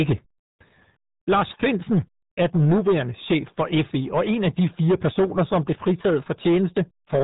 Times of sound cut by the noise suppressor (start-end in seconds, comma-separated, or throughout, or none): none